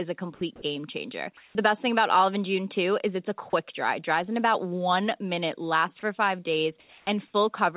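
Sound dropped by the voice detector first occurs at 0.35 to 0.41 s and again at 0.56 to 0.62 s, just before "game changer". Speech gives way to a flat, steady hiss, most likely because the sender's voice detector mistook quiet parts of the speech for background and stopped transmitting. About 50 ms and 30 ms of real sound are lost. On a waveform the speech envelope collapses into a thin, even band. On a spectrogram the formant and harmonic structure vanishes, leaving a uniform smear below the 4 kHz ceiling set by the G.711 narrowband path.

From 1.37 to 1.55 s, after "game changer", comfort noise replaces the background. During this 180 ms pause the real room sound is swapped for synthetic noise shaped roughly like it, at the same level and about 62 dB below the loud speech. It sounds smooth and featureless. A spectrogram shows a texture-free, evenly shaded strip where the real background would show fine irregular detail.

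Inside that stretch, at 1.53 to 1.55 s, the onset is clipped by the voice detector. The likely cause is that the detector was slow to notice the speech resuming, so the first 20 ms was replaced. The sound starts abruptly without its soft lead-in. The waveform jumps straight from the noise floor to speech, and the spectrogram shows a hard vertical edge.

The voice detector drops sound twice more, briefly at 3.50 to 3.53 s, losing about 30 ms, and at length from 6.80 to 7.07 s, right after "minute lasts for five". That last gap runs 270 ms and swallows about 120 ms of speech, so it is heard as a hole filled with steady hiss. It shows as a flat, structureless block in both displays.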